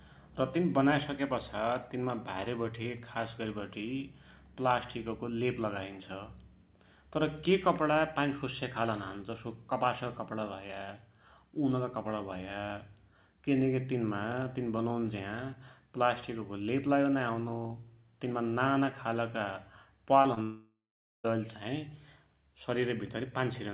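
At 20.22 to 20.26 s and again at 20.34 to 20.38 s there is short concealed packet loss: about 20 ms of audio is missing each time, and the receiver bridges each gap by extending the preceding sound before rejoining the real signal. Each is heard as a quick smear in the speech, with a small wobble where the patch blends back in. The band-limited sound, with nothing above 4 kHz, fits a G.711 call path at 64 kbps.

From 20.42 s to 21.26 s comes a long network dropout, likely caused by a sustained break in packet delivery. About 0.82 s of audio never plays. The receiver first keeps the last sound going, and that concealment fades out. The final half second or so is silence. The speech then resumes further on, with the missing stretch simply gone rather than delayed.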